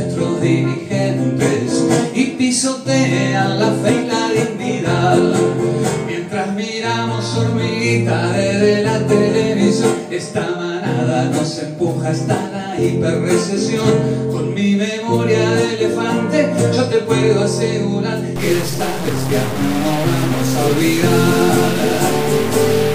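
From 18.36 s to the end, the sound turns harsh and buzzy, with a gritty noise floor filling the quieter stretches. This is a stuck bit, likely one data line held at a fixed value, which offsets roughly half the samples by a step of about -20 dBFS.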